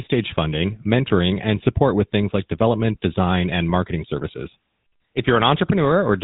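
From start to finish the speech has that unmistakable GSM full-rate codec sound, which fits the old 13 kbps phone codec. It rebuilds the vocal tract from coarse pulse excitation, so there's a plainly buzzy, gravelly roughness, and nothing gets through above about 3.8 kHz.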